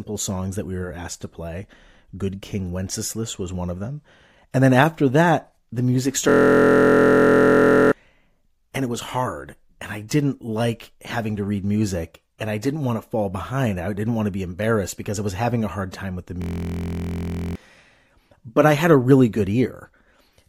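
A system hang loop occurs from 6.29 to 7.92 s and again from 16.42 to 17.55 s. Each time, the speech halts while the sound hardware keeps replaying the same 23.22 ms slice of its ring buffer, which fits a 1024-sample buffer. This repeats dozens of times and comes across as a steady, droning buzz at about 43.1 Hz. Roughly one and a half seconds of speech is lost in the first hang and about one second in the second.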